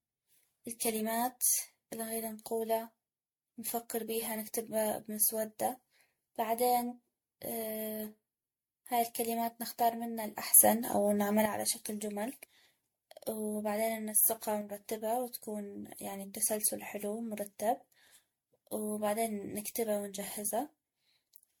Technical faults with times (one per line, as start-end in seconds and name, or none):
0.00-21.60 generation loss
10.54-11.46 sudden gain jump
14.61-14.81 sudden gain jump